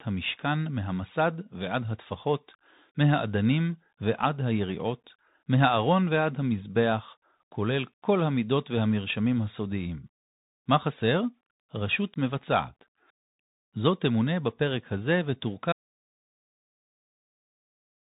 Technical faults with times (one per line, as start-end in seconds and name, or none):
0.00-18.11 Bluetooth CVSD headset codec
15.72-18.11 audio dropout to silence